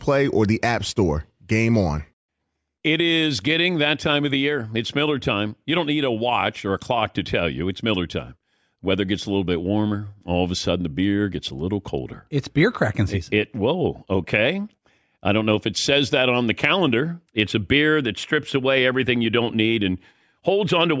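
Listening to the speech here, nothing stood out as a technical problem at any point.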